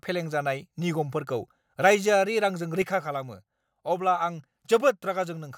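A speech recording with a sudden gain jump at 2.82 s: the level falls by about 6 dB in a single step and stays there to the end. The likely cause is a digital gain setting or bit shift applied instantly, without a ramp. What separates this from a talker moving off-mic or an automatic gain control easing down is that the background noise drops by the same amount at the same instant, with no gradual slope.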